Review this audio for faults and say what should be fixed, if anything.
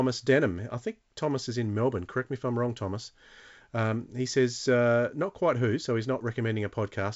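Nothing needs fixing: the speech has the expected character of G.722 wideband telephone coding at 64 kbit/s, with the spectrum ending near 7.7 kHz as that coding path implies, and no fault is audible.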